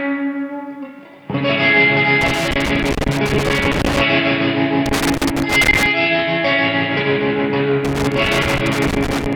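Three bursts of loose connector crackle land at 2.21 to 4.01 s, 4.86 to 5.86 s and 7.85 to 9.35 s. A worn or dirty contact keeps making and breaking, so the audio gets chopped into irregular scratchy crackle, with pops wherever DC sits on the line.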